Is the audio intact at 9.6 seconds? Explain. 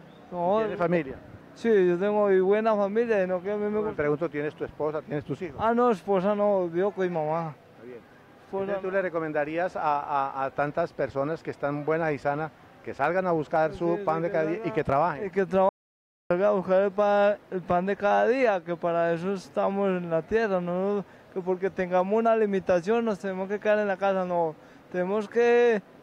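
Yes, at 9.6 seconds the audio runs without any dropout, glitch or other technical fault.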